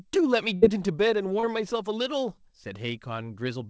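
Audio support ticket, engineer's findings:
Burst of packet loss, 0.56–0.65 s. Jitter buffer / network: a run of consecutive packets lost or arrived late. Receiver extrapolated the last audio for about 60 ms, attenuating as it ran, so the sound becomes a held, fading buzz or hiss. Playback then jumps ahead; about 60 ms of real audio is gone.

Short concealed packet loss, 1.40–1.46 s. Decoder input gap: roughly 30 ms never reached the decoder in time. Concealment continued the preceding sound for about 30 ms, then crossfaded back into the received audio. Heard as a brief smear or wobble; about 30 ms of the original is missing. Band-limiting to 8 kHz throughout comes from the call path, consistent with G.722 at 64 kbps, and is not part of either dropout.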